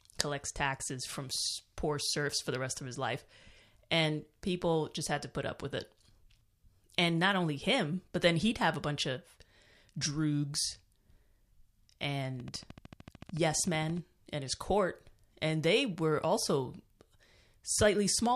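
From 12.4 to 13.98 s, before "and his court and", a regular train of clicks at 13.4 per second, likely interference, shows as evenly spaced vertical spectrogram lines.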